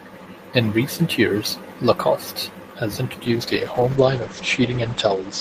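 A call bitrate drop begins at 3.27 s and lasts to the end of the clip at 5.41 s. The connection's bandwidth estimate fell, so the encoder was pushed from 48 kbps down to 10 kbps, staying at that floor for about 1.6 s. With so few bits, the speech is coded more coarsely and sounds rough, and the audio band narrows from 20 kHz to 8 kHz, leaving the voice muffled and dull through to the final moment.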